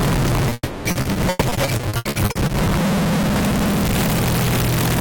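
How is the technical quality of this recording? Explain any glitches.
The recording has clear technical problems: a constant distortion across the whole clip, plus a cluster of network-related breakups in its first two and a half seconds.

The distortion runs throughout as a distorted edge, with noise creeping into the quieter moments instead of clean silence. The likely cause is a stuck bit: one data bit held at a fixed value, so roughly half the samples are offset by that bit's weight in a waveform-dependent pattern.

At 0.49 to 0.53 s there is a brief smear where the sound momentarily wobbles. This is short concealed packet loss: about 20 ms of audio never arrived, and the receiver bridged the hole by extending the preceding sound before blending back in.

Immediately after, from 0.53 to 0.87 s, the sound turns into a fading continuation of itself and then goes briefly silent, which points to a likely long network dropout. 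About 320 ms were patched by stretching the last sound, with a short stretch of silence before the real audio resumes.

From 0.91 to 2.51 s the sound becomes choppy, with repeated stutters. This is repeated packet loss producing robotic sound. Fifteen separate gaps, the longest 120 ms, were each filled by continuing the last sound, covering about 37% of that stretch.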